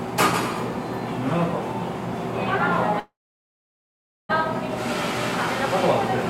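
A likely packet delay emptied the jitter buffer, causing a call audio freeze from 2.99 to 4.31 s: a fading buzz, then 1.17 s of silence, resuming with nothing lost.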